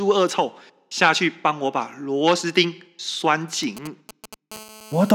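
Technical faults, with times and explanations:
3.63–4.34 s: GSM signalling bursts, a galloping dit-dit-dit of brief 217 Hz buzzes, roughly 15 dB below the speech, from rectified radio bursts sent in short groups, not continuously.
4.52–5.10 s: GSM phone buzz, a steady, raspy 217 Hz buzz rich in harmonics, about 20 dB below the speech, from rectified call transmission in bursts 217 times a second, unbroken unlike the earlier gallop.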